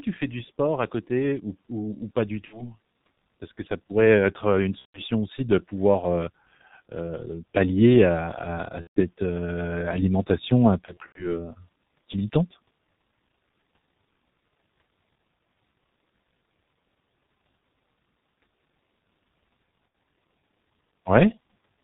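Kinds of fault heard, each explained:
G.723.1 codec: Throughout the speech the sound is muffled and hoarse, with nothing above 4 kHz and consonants smeared together. The damage is heavy, which fits the codec's low bitrate of about 6.3 kbit/s. G.723.1 is an early internet-telephony codec that codes the voice in 30 ms frames and refreshes its model of the vocal tract slowly, so fast detail is lost.
VoIP packet loss concealment by the speech codec: At 2.45, 4.79, 8.81, 10.85 and 19.88 s the voice briefly turns into a buzzy, stretched tone or coloured noise that fades. The decoder is filling missing packets by extending its last pitch and filter and lowering the gain frame by frame. The gaps run about 60 to 150 ms. Around 10.85 to 11.45 s the losses are scattered over roughly 300 ms, and the speech stays weak afterward.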